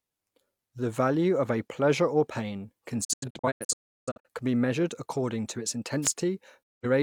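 A speech recording carrying three faults. Between 3.04 and 4.28 s there is a digital broadcast dropout: the receiver mutes in several short holes scattered across that span, losing about 0.77 s of speech in total, with the longest gap 0.34 s. A second dropout mutes 6.63 to 6.86 s, losing about 0.17 s. Each mute comes in over an 8 ms fade. The pattern points to a run of corrupted or missing frames, with the decoder silencing output until clean frames resume. On a waveform these appear as flat silent gaps with short ramped edges, and on a spectrogram as fully blank vertical bands across every frequency. From 6.02 to 6.09 s there is a wireless microphone noise hit, a brief swish of static. The analogue FM radio link faded, most likely from reflections cancelling the signal, so receiver noise rose over the speech. A spectrogram shows a narrow vertical smear of broadband hiss, and the waveform shows a short burst of dense, noisy energy.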